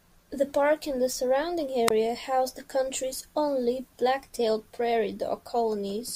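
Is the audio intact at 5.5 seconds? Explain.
No, there's sample clock jitter running through the whole clip, 5.5 s included. The converter's clock wobbles by a microsecond or two, so steep, bright parts of the speech get a faint hiss or roughness around 40 dB down that disappears in the pauses.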